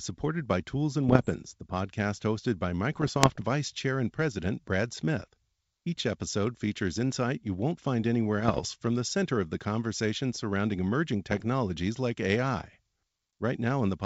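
Bit errors on an ADPCM link corrupt the G.722 decoder's step size and predictor, so each flipped bit rings on as pops, rough bursts and brief level jumps: 1.09–1.29 s before "the podcast hosted by", 2.92–3.42 s after it, 8.38–8.67 s, and 11.31–11.45 s after "the conversation surrounding emerging".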